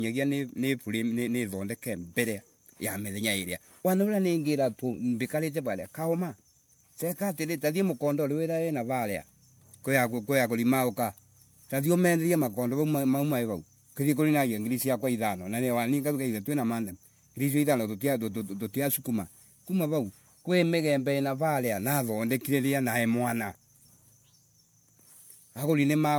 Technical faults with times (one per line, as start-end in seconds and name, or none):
0.00-26.18 generation loss